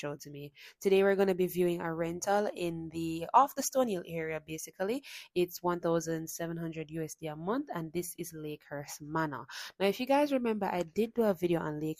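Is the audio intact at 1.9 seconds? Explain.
No. At 1.9 seconds the audio falls inside a run of clock slip clicks lasting from 0.31 to 11.83 s. They are faint, regular ticks, about one each second. The likely cause is two devices running on separate, unmatched clocks. A mismatch of around 20 ppm builds up to a whole sample roughly once a second. At each slip, one sample is dropped or repeated, leaving a small tick in the waveform.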